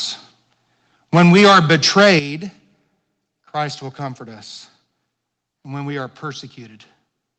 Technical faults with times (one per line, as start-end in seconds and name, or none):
1.14-2.13 microphone overload
1.18 microphone volume stepped down
2.19 microphone volume stepped down